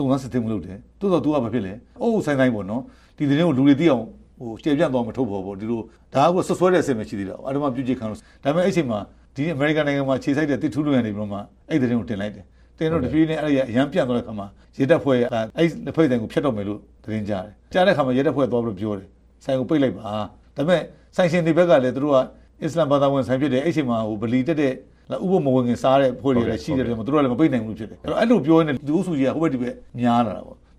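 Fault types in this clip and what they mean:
Nothing here stands out as a fault, so there's nothing to list for this one.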